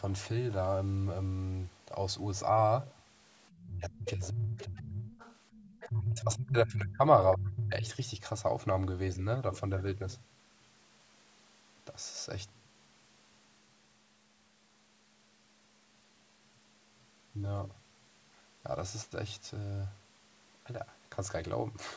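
Speech, with the other side's voice leaking through in faint scraps at 3.5, 4.6 and 5.1 to 5.9 s, well below the talker and clearly stronger near 4.6 s. The likely cause is incomplete echo cancellation of loudspeaker playback. On a spectrogram these show as weak, broken harmonic traces under the main speech. The talker's speech is suppressed in double talk from 3.66 to 5.18 s, 5.87 to 7.01 s and 7.35 to 7.85 s, where it dips deeply. This is likely the canceller turning down both voices while the far side talks. The waveform envelope sags sharply in those stretches, and the spectrogram stays beneath the 8 kHz ceiling that the call processing sets.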